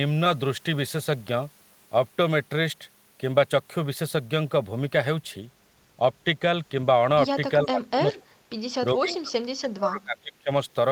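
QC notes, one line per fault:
7.65 to 8.23 s, speech suppressed in double talk: the speech dips by around 20 dB for about half a second. It's likely the echo canceller clamping down while the far side talks.
8.93 to 10.5 s, speech suppressed in double talk: a deeper cut, around 30 dB, lasting roughly a second and a half. Same likely cause: the canceller can't tell the speech from the echo, so it suppresses both.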